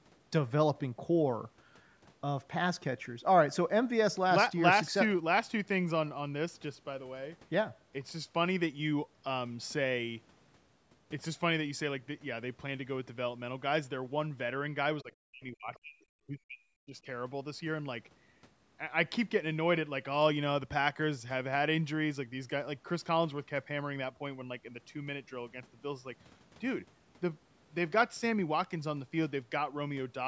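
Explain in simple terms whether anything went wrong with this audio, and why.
Yes, two things went wrong, both in the middle of the clip.

From 15.03 to 16.11 s and again from 16.27 to 17.07 s, the speech drops away sharply and nearly vanishes. This is speech suppressed in double talk. Both sides were likely talking at once, so the call's echo control turned everything down.

Between 15.74 and 15.79 s, a faint scrap of the other side's voice leaks through. The echo control likely failed to remove all of the loudspeaker sound picked up by the microphone.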